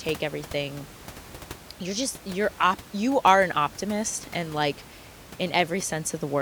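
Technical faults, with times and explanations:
Nothing stood out on listening to this speech; the room noise sits about 19 dB below the talking and belongs to the recording itself.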